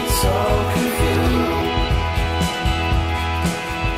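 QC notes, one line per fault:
1.61–1.63 s, skip ahead: A stretch of audio, roughly 0.4 s of it, was discarded while later audio was already queued, so playback jumped straight to the newer material and the delay shrank by about the same amount. Nothing was inserted to cover the loss, and the two sides meet with no pause. The sound lurches forward abruptly, with its continuity broken at the join, as if a chunk had been snipped out of the middle.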